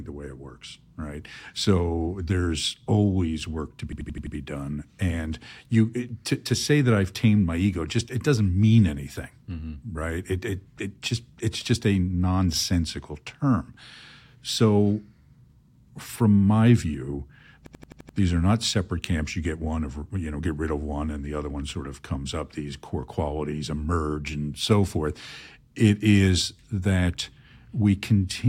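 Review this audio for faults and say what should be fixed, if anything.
A system hang loop occurs at 3.93–4.35 s and 17.66–18.18 s. An 85 ms segment repeats five, then six times, giving an 11.7 Hz stutter as the hardware replays a stalled ring buffer, consistent with 4096 samples. Fix the driver or system stall that stops buffer refills.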